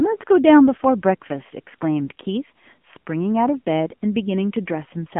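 Throughout, the speech sounds thin, buzzy and plainly synthetic, with nothing above 3.6 kHz. That is the AMR narrowband mobile codec, at a low rate that fits roughly 8 kbps.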